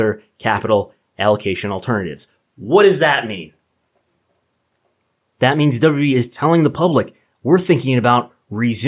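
No technical faults are audible.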